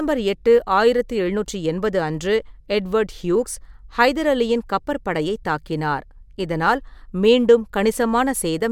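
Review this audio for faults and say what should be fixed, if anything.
No faults; nothing needs fixing.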